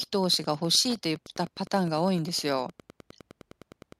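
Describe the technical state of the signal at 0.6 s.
At 0.6 s you're hearing Wi-Fi interference, which runs through the whole clip. A nearby radio's beacon every 102.4 ms gets rectified by the audio circuit, so there's a steady tick about ten times a second, sitting well under the speech.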